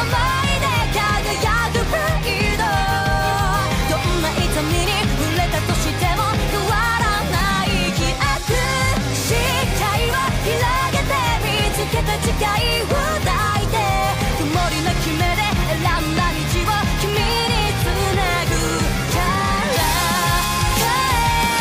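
Pre-emphasis left on from 19.73 to 21.61 s: a 50/15 µs boost was never de-emphasised, lifting 10 kHz about 8 dB, so the audio turns thin, bright and sibilant.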